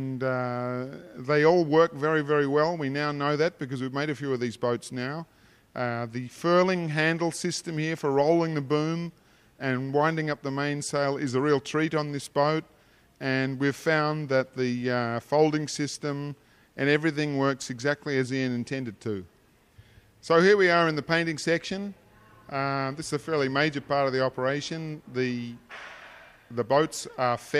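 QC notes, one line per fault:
No faults were heard anywhere in the clip. Nothing here calls for a fix or a further listen.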